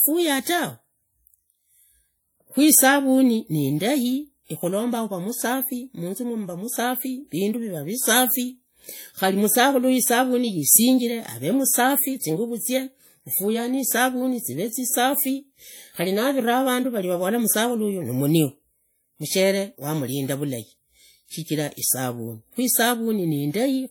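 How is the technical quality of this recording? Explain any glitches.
The recording has plainly audible codec damage throughout the speech. It is likely WMA compression. The sound rings and washes, and a hiss breathes with the voice. This transform codec works in long blocks, so quantisation noise spreads across each block instead of staying under the sound. Quiet spectral lines are zeroed. The damage fits a low bitrate, around 48 kbps. Nothing is present above 20.1 kHz.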